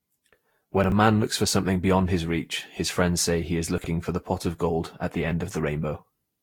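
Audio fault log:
throughout: generation loss. The speech sounds swirly, smeared and hollow, with consonant attacks blurred and a watery, phasey texture. Nothing is present above about 19.3 kHz. This is likely the result of lossy Vorbis encoding repeated roughly seven times at around 70 kbit/s. Each re-encode quantises the signal again on a shifted frame grid, so noise and spectral holes build up into more degradation than a single pass at that bitrate would cause.
0.84–0.92 s and 3.78–3.86 s: chunks out of order. A 20 ms chunk plays three chunk slots late, after audio that should have followed it, so each 80 ms stretch comes out briefly jumbled. The first occurs just before "a man looks for". The second falls between "friends say he is" and "for the pot of". No audio is lost, but the misplaced chunk creates three hard splices in each stretch.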